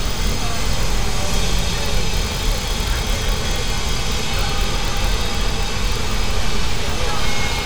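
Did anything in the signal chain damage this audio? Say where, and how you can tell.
No, nothing in the signal chain has left an audible mark on this recording of sounds. There is no stage to point to and no moment where the signal gives a problem away.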